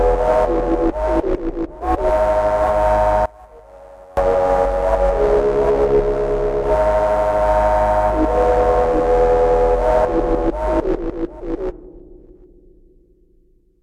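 A polarity flip on one stereo channel is the likely cause of the dropout in this recording of sounds: between 3.26 and 4.17 s, one channel inverted relative to the other, so the material common to both sides cancels when summed to mono. The level falls by about 26 dB across that stretch, leaving only a faint residue of whatever differs between the channels before the full sound returns.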